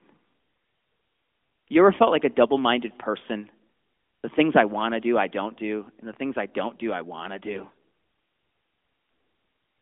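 AMR bit errors hit this speech recording from 7.54 to 7.76 s. Flipped low-priority bits, at a rate of a few percent, misplace the excitation pulses and skew the fine pitch, gain and spectral values, so the voice briefly turns hoarse and gargly while holding roughly its pitch and level, within the narrowband AMR mobile codec's 200 Hz to 3.5 kHz band.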